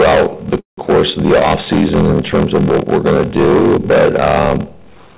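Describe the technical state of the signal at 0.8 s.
At 0.8 s the sound has just resumed after a call audio freeze from 0.6 to 0.79 s, likely caused by held-up packets emptying the jitter buffer. The last sound is stretched into a fading buzz or hiss, then about 130 ms of flat silence. Playback restarts without loss but 174 ms late, visible as a flat waveform stretch ending abruptly.

Throughout, including this moment, a padded block size mismatch inserts a short zero gap into each block, which fits 1024-sample reads. This produces a 43.1 Hz buzz and slows the audio to 0.861 speed. A spectrogram shows evenly spaced vertical stripes, and the waveform shows regular dropouts.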